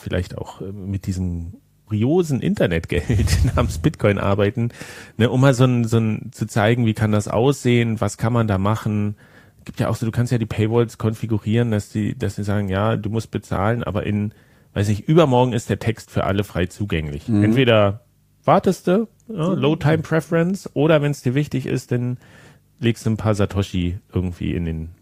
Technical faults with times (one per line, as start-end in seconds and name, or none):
1.87-1.94 compressed frames skipped